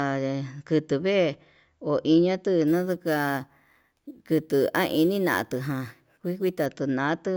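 Imaging from sample-and-hold upsampling runs from 2.68 to 6.66 s, just after "kundu vee ho iñatu". Each sample was repeated without smoothing, which fits a 16 kHz source raised to 44.1 kHz. Mirrored speech spectra fill 8 to 16 kHz at about 22 dB below the signal, heard as a metallic fizz that tracks the speech.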